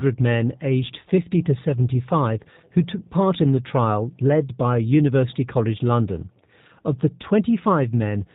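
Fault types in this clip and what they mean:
G.729 codec: The speech sounds muffled, with nothing above 4 kHz, and carries a plainly audible rough, synthetic edge. That fits 8 kbit/s G.729A, which rebuilds each 10 ms frame from a vocal tract filter, pitch predictor and sparse pulses.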